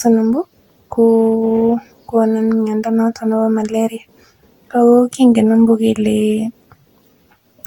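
Throughout, the speech sounds swirly, smeared and hollow, with blurred attacks and nothing above 19.5 kHz, likely generation loss from around seven successive lossy re-encodes.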